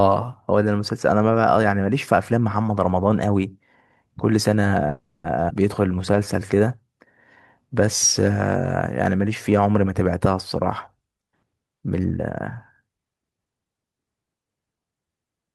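At 4.89 s the speech stops moving forward and a call audio freeze begins. It lasts until 5.25 s. For about 350 ms the last sound is carried on as a fading buzz or hiss, with no true silence. The likely cause is packets held up in transit until the jitter buffer ran dry. When the audio resumes, it picks up exactly where it left off. Nothing is lost. The stream now runs 350 ms later than before.

At 5.49 s there is a skip ahead. Playback jumps forward abruptly, with only a 10 ms fill at the join. Roughly a tenth of a second of speech is gone. The two sides are butted almost directly together. This happens when a stretch of audio is dropped while later audio is already waiting. Here it claws back about a tenth of a second of the delay that the freeze added.

From 5.76 s to 6.56 s comes a jitter buffer slow-down. The speech plays at 88 percent speed, and the pitch stays the same. Sounds are drawn out, and there may be a slight warble. 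The receiver is building up a reserve, either because its buffer was running low or because it had just raised its target delay. It does this by repeating single pitch periods or bits of pauses many times in a row. Together those repeats add 107 ms.

From 11.95 s to 13.46 s there is a jitter buffer speed-up. The speech runs at 111 percent speed, and the pitch stays the same. It sounds hurried. The buffer is holding more audio than it aims for. To shrink the delay, the receiver cuts out short pieces of one or a few pitch periods, again and again. Roughly a fifth of a second is removed across the stretch.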